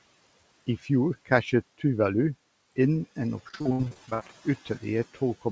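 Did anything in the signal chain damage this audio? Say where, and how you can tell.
Yes, at the network stage: repeated packet loss (robotic sound) from 3.49 to 4.30 s. Dropouts of up to 66 ms are patched by extending the previous sound, so the span turns choppy, with pieces missing. A spectrogram shows smeared, repeated frames and broken harmonics.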